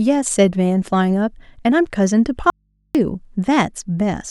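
At 2.5 s the speech cuts out abruptly for about 0.45 s, returning at 2.95 s: an audio dropout to a faint residue. The gap holds mains hum far below the signal, likely from an input left open while the path stayed live, unlike a natural pause or fade.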